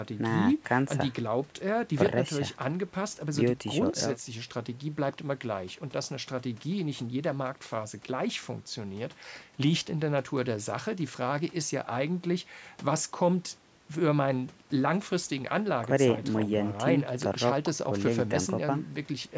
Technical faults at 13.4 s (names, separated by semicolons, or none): none